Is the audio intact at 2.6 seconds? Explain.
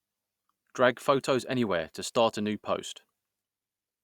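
Yes, at 2.6 seconds the speech carries through with no dropout, click, glitch or other fault.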